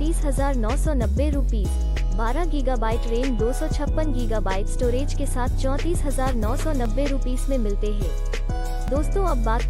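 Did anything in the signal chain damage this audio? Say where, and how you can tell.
Yes. Four small jumps in the sound at 1.04, 1.97, 6.85 and 8.88 s, each with no gap, point to a dropped buffer (overrun), likely at the driver or buffer stage. A few milliseconds to about 15 ms of audio vanishes and the edges are spliced together. On a waveform each shows as an abrupt step; on a spectrogram, a thin vertical broadband line.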